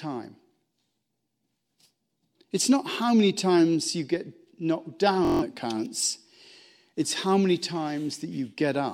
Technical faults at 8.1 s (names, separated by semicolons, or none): none